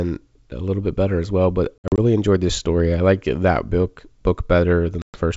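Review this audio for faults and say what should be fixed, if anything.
Packet loss on an ADPCM call occurs twice. Between 1.79 and 1.99 s, after "better as well but" and before "enjoyed this story I", about 120 ms goes missing in gaps up to 60 ms, and from 5.02 to 5.18 s a single 120 ms hole appears, each pointing to roughly seven lost packets. The G.722 wideband audio drops to hard-edged silence, and the decoder's predictor and step size lose track, so sound re-enters slightly distorted. Adding packet loss concealment would prevent it.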